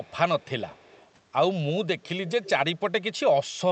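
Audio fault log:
0.00–0.13, 0.39–0.49, 0.68–1.10, 2.27–2.49 s: echo leak. A far-end echo canceller likely passes loudspeaker pickup back, giving faint 198 ms-delayed copies about 30–35 dB down, then a stronger 225 ms one.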